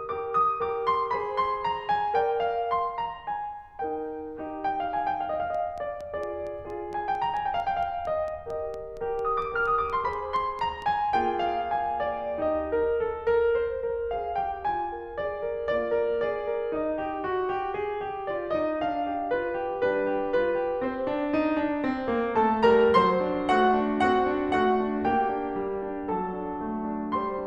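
A music clip with a train of clicks from 5.55 to 10.83 s: around twenty same-shaped pops at a regular 4.36 per second, about as loud as the music. Unlike random vinyl-style crackle, their even spacing points to likely interference or a faulty connection or power supply.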